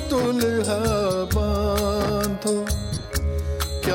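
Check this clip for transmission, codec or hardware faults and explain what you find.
One transmission fault is present: lost LE Audio frames from 2.95 to 3.05 s. About 50 ms of audio went missing across that 100 ms stretch, in short gaps of roughly 20 ms at most, which fits around five dropped 10 ms frames. The LC3 decoder covered each gap by repeating the previous spectrum with scrambled phase signs, so the sound there turns into a brief noisy smear. The clip also carries light codec compression.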